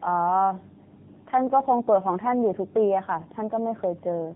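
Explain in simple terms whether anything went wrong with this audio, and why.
The speech shows tandem speech coding from start to finish: it passed through a mobile-phone speech codec twice, with a landline-style stage between. Each pass squeezed an already-squeezed version, so it sounds rough, muffled and warbly, with nothing above 3.8 kHz.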